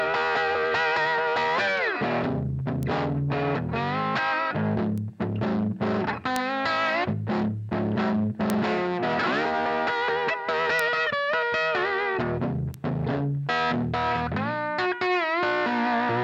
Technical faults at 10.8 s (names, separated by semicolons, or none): bit error spike